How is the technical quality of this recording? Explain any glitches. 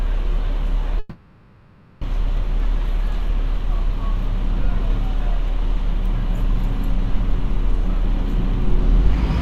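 The recording has one clear glitch, a long network dropout from 0.99 to 2.05 s. Incoming audio likely stopped arriving for about a second, so the receiver had nothing real to play and spent roughly 1.04 s filling the gap by stretching the last received sound. That comes across as a smeared, buzzy continuation rather than silence. When the stream resumes, about a second of the original sound is simply gone, and the timing afterward sits very slightly later than before.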